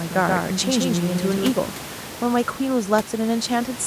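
From the start of the clip until 1.52 s the speech is a doubled audio track: a full-band copy trails roughly 150 ms behind at about 5 dB lower, likely from a second, slower capture path. Unlike room echo, it has no decay or colour, and it cuts off abruptly, with the room noise about 16 dB below the speech.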